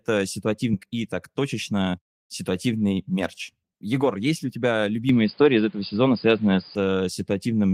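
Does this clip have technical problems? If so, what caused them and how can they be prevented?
Yes, there are three.

At 0.73 s there's a skip ahead: roughly 0.7 s of speech never plays. The receiver dropped a chunk, either lost in transit or discarded when the jitter buffer overflowed, while later audio was already queued, so playback jumps straight over the hole with no gap filling it. The two sides butt together abruptly. To prevent it, size the jitter buffer generously and let it shrink gradually instead of flushing whole chunks.

Right after that, from 0.83 to 2.51 s, you get a jitter buffer speed-up. The buffer was sitting on more audio than its target, so the receiver trimmed out tiny pitch-period slices over and over, about 150 ms in total, running the speech at about 108% speed. The pitch stays put, but the talker sounds a bit rushed there. To prevent it, keep network delivery steady so packets don't arrive in bunches, and cap how aggressively the buffer catches up.

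From 5.09 to 6.75 s the sound goes narrow and boxy, with nothing above 4.9 kHz, a faint new noise floor about 40 dB below the speech, and a level shift of about 5 dB. There's no silence at the changeover. The likely cause is the input switched to a poorer device, such as a headset call profile or a different mic. To prevent it, pin the input device and disable automatic switching during recording.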